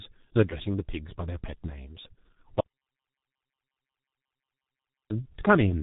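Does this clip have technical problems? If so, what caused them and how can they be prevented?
Yes. Throughout, the speech is muffled and hoarse, with smeared consonants and nothing above 4 kHz. This is heavy G.723.1 codec damage: its 30 ms frames and slow voice model fit its 6.3 kbit/s mode. A wideband codec or higher bitrate would prevent it.

From 2.12 to 2.16 s, the speech briefly turns into a fading, stretched-out extension of the preceding sound. This is VoIP packet loss concealed by the speech codec. About 30 ms of audio went missing, and the decoder filled the gap by repeating its last pitch and filter at falling gain. A jitter buffer with forward error correction would prevent it.

From 2.60 to 5.10 s, the audio cuts to silence, with no room tone, for about 2.5 s. This is an audio dropout to silence. The likely cause is that the input was lost, through a disconnected device or a failed link, while silence kept being written. 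Securing connections and monitoring input levels would prevent it.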